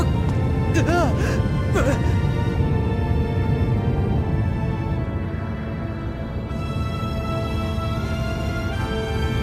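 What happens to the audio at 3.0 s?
Nothing goes wrong at 3.0 s: the audio is intact there, with only the light lossy compression present, too slight to stand out as a fault.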